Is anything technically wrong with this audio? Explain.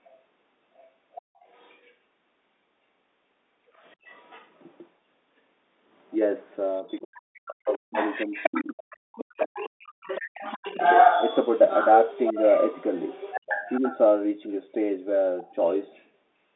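Yes. The audio has two faults, both tied to echo control on a speakerphone-style call.

Other side's voice leaking through occurs at 0.07 to 0.16 s, 0.77 to 1.93 s, 3.91 to 4.47 s, 6.77 to 9.69 s, 10.01 to 13.99 s and 15.42 to 16.02 s. A second voice sits under the main speech. Early on it is faint, around 30 to 35 dB down. From 6.77 s it grows much louder, only about 10 dB below the speech. From 10.01 s it is nearly level with it. The likely cause is an echo canceller leaving loudspeaker sound in the microphone signal.

Speech suppressed in double talk runs from 6.83 to 10.47 s. This overlaps the loudest leakage. For roughly three seconds in total, the main voice dips and breaks up. At its worst it drops by around 40 dB, almost vanishing. This is likely the echo canceller failing to separate the local talker from the returning echo while both sides speak. It then turns everything down together, taking the wanted speech with the echo.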